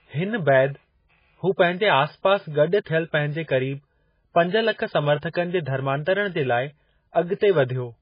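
A speech recording that has likely passed through heavy MP3 compression, and the damage runs through the whole clip. Starved of bits, the encoder has discarded everything above 5 kHz and zeroed the weaker frequency lines, which flicker in and out from frame to frame. The result is a dull, band-limited sound with a watery, swirling texture, chirpy metallic s sounds and smeared consonant onsets, a degree of damage that fits a bitrate near 16 kbps.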